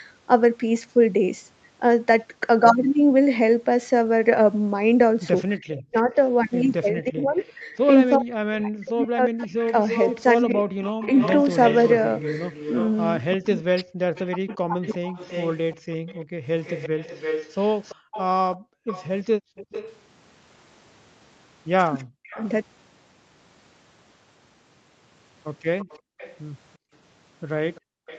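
Echo leak runs from 5.71 to 22.48 s and again from 25.8 s to the end of this speech recording. A delayed copy of the talk trails the original by 338 ms, roughly 15 dB below it in the first stretch and roughly 25 dB below in the second. The likely cause is a far end on loudspeaker whose echo canceller left part of what its microphone picked up in the outgoing signal, so the sound returns a third of a second late. Speech suppressed in double talk occurs between 5.75 and 14.81 s, where the talker's level falls in pieces adding up to about four seconds, at worst by something like 40 dB. A brief dip of about 0.2 s follows between 22.17 and 22.41 s. This is likely the canceller failing to tell the near talker from its loudspeaker echo while both sides were active, so it turned everything down. Background gated by the echo canceller appears between 15.77 and 19.56 s and again from 26.0 to 28.07 s. 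During these spans the room tone drops by about 35 dB and about 34 dB, for roughly a second in total in the first span and half a second in the second. The canceller clamped the microphone hard whenever the loudspeaker was playing and released it afterwards.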